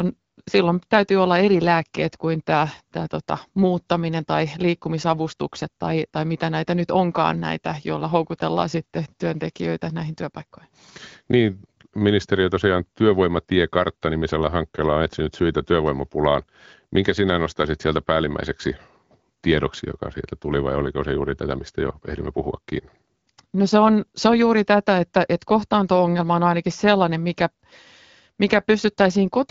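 No technical faults are audible.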